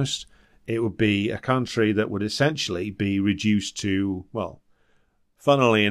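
Across the whole speech recording, a faint hiss-like roughness clings to loud, bright sounds and vanishes in the pauses, roughly 40 dB down. This is sample clock jitter. The converter's clock wanders by a microsecond or two and mistimes samples, so steep waveform slopes suffer most.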